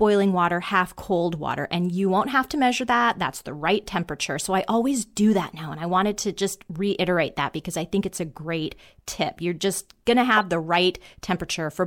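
At 10.35 s, right after "just going to", a corrupt frame decoded fault breaks into the speech. It lasts until 10.42 s, roughly 76 ms. Flipped bits damaged a few compressed frames in a row, and the decoder played them anyway. The misread gains and codes put energy at the wrong frequencies. The result is a short, harsh chirp-like burst of noise. It is loud, peaking around -10 dBFS.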